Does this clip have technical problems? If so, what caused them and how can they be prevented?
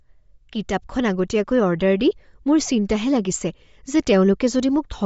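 Yes. The speech was most likely sent over a Bluetooth LC3 compression link at a low bitrate, which fits an encoding around 32 kbps with 10 ms frames. Throughout, the codec discards the upper spectrum, leaving nothing above 7.7 kHz, and patches lost detail with noise, giving the voice a plainly audible breathy, grainy edge. To prevent it, record through a wired connection or configure the Bluetooth link for a higher LC3 bitrate.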